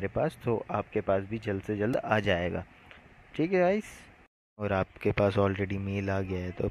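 A repeated buffer occurs at 1.94 s. New audio failed to arrive in time, so the last block, about 1.45 ms long and consistent with a 64-sample buffer, played three more times with hard joins. At that tiny size it sounds like a brief click, displacing a few milliseconds of audio.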